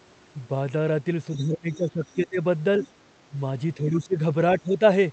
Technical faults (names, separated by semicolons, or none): other side's voice leaking through; speech suppressed in double talk